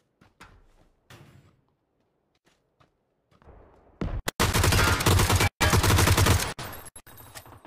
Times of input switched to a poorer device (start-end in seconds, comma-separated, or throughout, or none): none